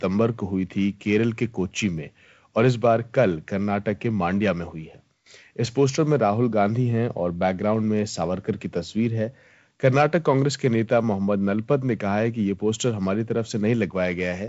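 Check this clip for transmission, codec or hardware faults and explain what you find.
The speech, carried through G.722 wideband coding with nothing above about 7 kHz, has one fault: dropped samples at 1.98 s. A fraction of a millisecond is likely missing, so the waveform jumps abruptly to a later value. It is heard as one sharp click and shows as a thin vertical line across the spectrogram.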